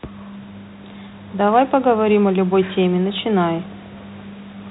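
No technical fault can be heard in the speech, which carries the narrow telephone band of G.726 ADPCM at 32 kbit/s with nothing above 4 kHz and only light coding roughness, over room noise sitting about 25 dB below it.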